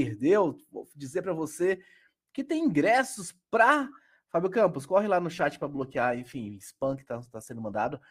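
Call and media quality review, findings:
Adaptive stream at a lower bitrate, 5.33 s to end (8.11 s). Speech quality drops abruptly, with codec artefacts rising. The likely cause is the player's bitrate adaptation stepping down to a lower rendition after a throughput drop; the sound fits a switch from Opus around 64 kbit/s to about 16 kbit/s. It differs from packet-loss concealment in having no gap or glitch: a clean, sudden quality step that holds steadily rather than fluctuating.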